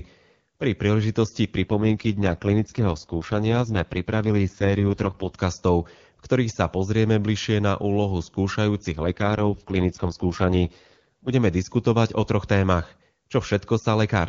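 From 1.62 to 5.36 s and 8.92 to 11.32 s, just before "diskutovať o troch témach", the speech turns rough and synthetic. This is an AMR rate drop, consistent with the HD Voice codec falling from 23.85 to 6.6 kbit/s.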